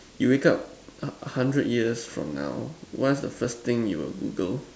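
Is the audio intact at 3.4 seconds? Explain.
No. A dropped buffer (overrun) occurs at 3.45 s, where the speech skips ahead a few milliseconds. The software likely failed to collect its samples before the hardware overwrote them, so the audio on either side joins with no gap.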